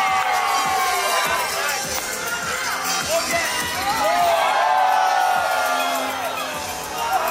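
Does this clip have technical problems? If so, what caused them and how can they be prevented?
No, nothing in the recording points to a capture, transmission or playback fault, so there is no cause to trace and nothing to prevent.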